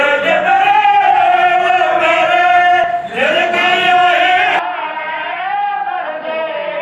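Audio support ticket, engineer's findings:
Skip at 2.83 s, file or decoder side. Looks like compressed frames skipped, a couple of 24 ms frames, so roughly 50 ms of audio jumps ahead.

From 4.59 s to the end, everything above 5.1 kHz is gone, level drops about 10 dB, and a new noise floor sits around 35 dB down. No gap at the changeover. Input likely switched to a poorer device.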